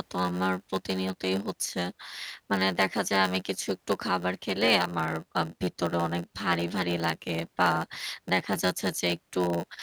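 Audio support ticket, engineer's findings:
Block size mismatch (padded), whole clip. Speech carries a steady buzz at about 91.9 Hz with a short silent gap in every block. Delivery runs at 0.919x speed, so the upstream stage writes blocks shorter than the downstream stage reads and zero-fills the remainder.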